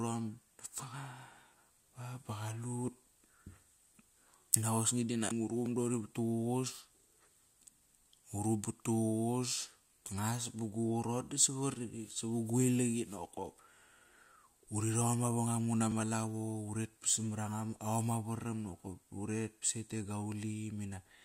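From 5.28 to 5.31 s, damaged data in the compressed stream makes the decoder lose sync and hunt for the next frame, producing a brief glitch. At 5.66 s and 15.92 s, a block of digital silence, about 1.1 ms and 3.3 ms long, drops the speech abruptly out and back, heard as a dry tick with no garbled tone.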